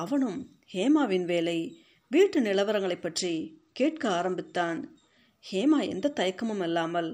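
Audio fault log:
3.18 to 5.18 s, Bluetooth SBC bit pool drop: the speech dulls and turns gritty because a congested link left too few bits for the upper sub-bands, which fits a bit pool cut from 31 to 12, near 88 kbps. A spectrogram shows blank upper bands and speckled noise.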